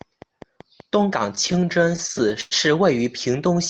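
It's a short speech clip with two problems. Right at the start, from 0.01 to 0.81 s, there's a train of clicks: a steady tick at about 5 per second, roughly five pops in all, each about as loud as the speech itself. They're evenly spaced and alike in shape, which most likely points to interference from nearby gear or a faulty connection or power supply rather than anything in the recording itself. Then between 1.35 and 2.53 s you get repeated stalls (stutter). The jitter buffer kept running dry because packets arrived late, so the receiver stretched the last bit of sound each time until it could carry on. That adds up to about 260 ms of filler, with the longest hold at 102 ms, so around 22% of that stretch is concealment. Nothing is actually lost, but the speech drags and hiccups. The call path itself is fine: the audio went through the Opus codec, which caps the top end at 8 kHz.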